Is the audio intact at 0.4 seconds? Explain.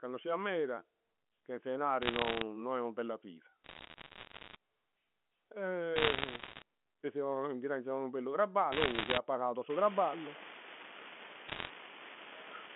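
Yes, the speech at 0.4 seconds is intact, with nothing beyond the narrow 200 Hz to 3.4 kHz band of its G.711 telephone coding.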